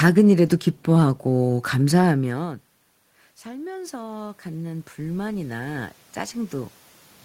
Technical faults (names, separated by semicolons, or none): automatic gain rising